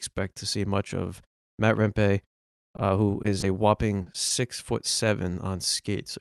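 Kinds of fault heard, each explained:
Short concealed packet loss: Five little gaps between 2.52 and 4.32 s, mostly 20 ms each, with a 40 ms one at 4.02 s. The receiver papered over each by carrying the last sound forward, so you hear a quick smear or wobble rather than silence.
Short stall from a late packet: At 2.76 s a packet turned up late and the jitter buffer ran dry. The receiver stretched the current sound by 20 ms until it arrived. Nothing got lost, but that bit drags slightly.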